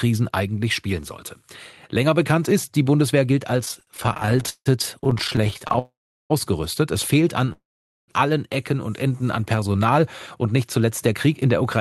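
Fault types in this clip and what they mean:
repeated stalls (stutter): From 3.65 to 5.79 s, dozens of brief holds of up to 163 ms, concealing about a third of the span, drag the sound as late packets repeatedly drain the jitter buffer.
call audio freeze: At 5.79 to 6.32 s and 7.52 to 8.10 s, the sound halts for about half a second, mostly silent, likely from delayed packets emptying the buffer, then resumes where it stopped.
jitter buffer slow-down: From 8.90 to 9.80 s, just before "und nicht zuletzt der", repeated pitch periods stretch the sound to 90% speed at unchanged pitch, adding about 0.1 s to rebuild the buffer.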